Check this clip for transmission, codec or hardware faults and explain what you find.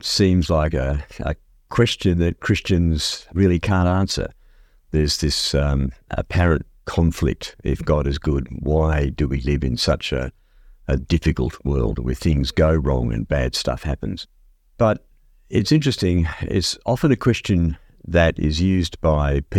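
Nothing faulty turns up anywhere in the speech, and the signal stays continuous and stable from beginning to end.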